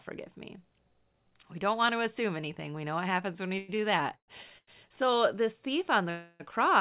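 Speech heard over a narrowband call path with nothing above 4 kHz, which fits G.711 mu-law at 64 kbps, is interrupted by three call audio freezes, likely from packets held up in transit so the jitter buffer ran dry: 3.58–3.70 s after "happens when we" (about 103 ms filled), 4.16–4.30 s (117 ms, 90 ms of it silent) and 6.10–6.42 s after "this thief on" (294 ms). Each is a fading buzz or hush inserted into the sound. The two short stalls from a late packet are different. At 3.76–3.80 s (18 ms filled) and 4.58–4.69 s (95 ms filled), the last sound is simply held too long with a slight buzz or dip, with no fade or silence. In both cases the audio resumes where it stopped, so almost nothing is lost.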